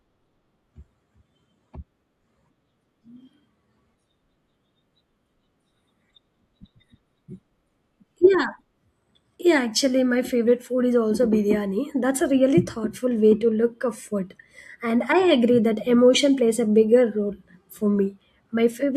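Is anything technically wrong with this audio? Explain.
No, nothing technically wrong can be heard in this speech recording. Nothing in it points to a problem with how it was captured, processed or delivered.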